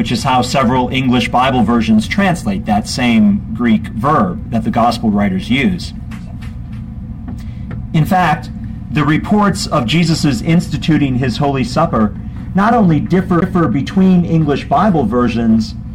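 At 13.41 s there is a CD skip: a knock or surface flaw threw the laser onto a different turn of the disc's spiral, so playback mutes very briefly with a tick, then resumes abruptly from another point in the audio, breaking its continuity.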